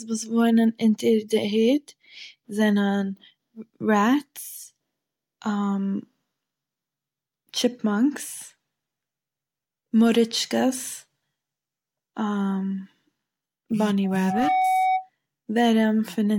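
From 14.04 to 15.10 s, a loudspeaker feedback squeal sounds over the speech. It is a steady tone near 752 Hz. The microphone was hearing its own loudspeaker, and the loop gain passed one there. The tone swells over about half a second, reaching roughly speech level.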